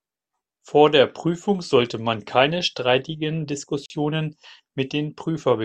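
At 3.86 s a 41 ms gap at a join of encoded pieces opens: untrimmed encoder delay and padding insert silence, yet the speech resumes exactly where it stopped, unlike a dropout.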